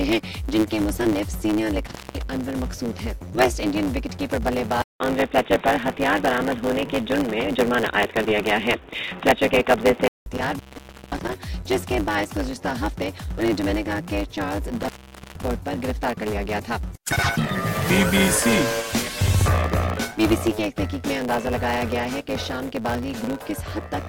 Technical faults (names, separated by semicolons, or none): block size mismatch (truncated); intermittent contact; input switched to a poorer device